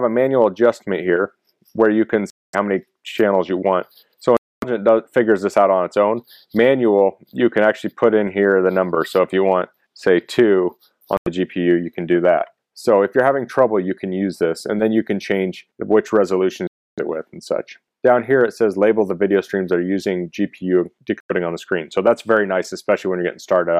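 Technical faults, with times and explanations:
2.30–2.55 s, 4.37–4.64 s, 11.17–11.28 s, 16.67–16.99 s and 21.20–21.31 s, Bluetooth dropout: the sound cuts abruptly to silence for roughly 0.09 to 0.30 s, then resumes further along as if it had kept playing, likely because wireless packets arrived too late and were discarded.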